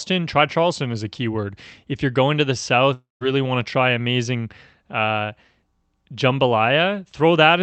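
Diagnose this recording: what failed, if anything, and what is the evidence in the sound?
Network stage: a long network dropout, likely from packets ceasing to arrive, runs from 2.93 to 3.23 s. The receiver extends the last speech as a fading buzz, then 160 ms of silence follows, and speech resumes with 280 ms missing.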